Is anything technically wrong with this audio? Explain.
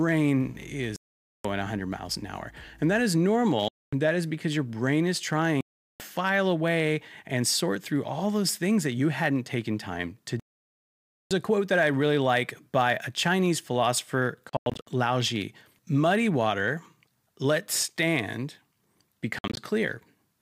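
Yes, two faults are audible.

Block size mismatch (truncated), throughout: one stage hands over longer blocks than the next stage takes in, and the tail of each block is discarded. The cut repeats 100 times a second, so a steady 100 Hz buzz sits under the speech for the whole clip. The two block sizes are so close that the speech runs at essentially its normal speed and pitch.

Bluetooth dropout, six times: packets likely failed to reach the headphones in time and were dropped, so the output falls silent and picks up further on, as though the speech had kept running. The gaps are 0.96 to 1.45 s, 3.68 to 3.93 s (after "that is", resuming on "that is because your"), 5.61 to 6.00 s (after "because your brain is", resuming on "away and sort through"), and 10.40 to 11.31 s, the longest at about 0.9 s (after "hadn't taken time to", resuming on "a quote that I"). At 14.49 to 14.87 s and 19.39 to 19.57 s the losses are broken into short stutters, the longest about 90 ms.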